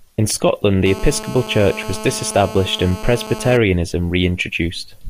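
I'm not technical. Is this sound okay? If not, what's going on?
No. From 0.86 to 3.57 s a harsh, raspy GSM phone buzz sits under the speech. A nearby 2G phone on a call sends radio bursts 217 times a second, which the audio gear picks up. Unlike smooth mains hum, it sounds gritty and rattling.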